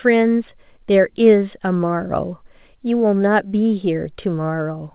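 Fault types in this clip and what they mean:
No faults can be heard in this speech. The sound stops at about 4 kHz with a faint hiss that follows its level, which fits a mu-law telephone line sampled at 8,000 times a second.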